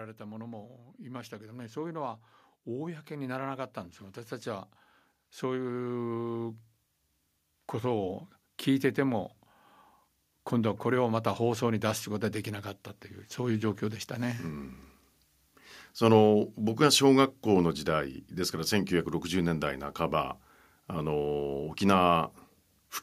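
Automatic gain rising occurs twice: the gain control, treating the input as too quiet, raised its level by about 14 dB from 0.17 to 9.3 s, then about 5 dB from 10.5 to 15.64 s, so speech and background swell together.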